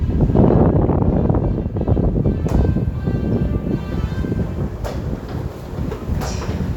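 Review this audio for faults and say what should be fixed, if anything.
No faults can be heard anywhere in this recording of sounds. Nothing needs to be fixed.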